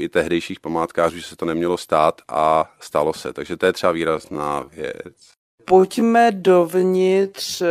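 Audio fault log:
4.07–7.71 s, time-stretched section: After "to je třeba" the speech slows to 0.56 times speed with pitch unchanged. It drags, likely from software stretching it to fill a length.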